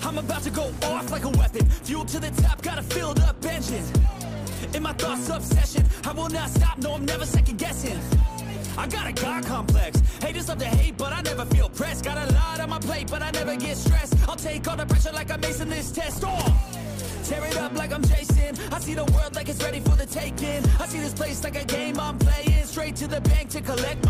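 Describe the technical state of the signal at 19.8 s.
No fault can be heard at 19.8 s; the signal is intact at that moment.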